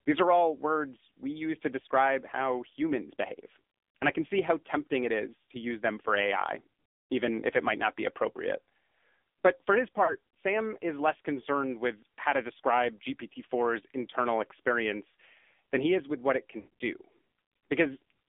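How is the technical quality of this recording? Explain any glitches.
The recording is a degraded phone-call capture, with coding damage throughout and two brief dropouts.

Across the whole 18 s, the AMR narrowband mobile codec is plainly audible. The band runs only from about 250 Hz to 3.6 kHz, so the speech sounds thin and boxy. The coder rebuilds each frame from a vocal-tract model excited by a few pulses. At this low rate, consistent with the 7.4 kbps AMR-NB mode, that gives the speech a buzzy, synthetic edge.

Lost AMR speech frames appear twice. From 10.04 to 10.15 s, just after "for his", about 40 ms is missing, consistent with two lost 20 ms frames. The decoder repeats its last pitch and filter settings at falling gain, so the sound briefly smears and dips. From 16.60 to 16.74 s, after "is with what it", about 120 ms is lost, scattered over 160 ms with a longest run of 80 ms. That gives a stuttering warble that sags toward silence before the speech returns rough.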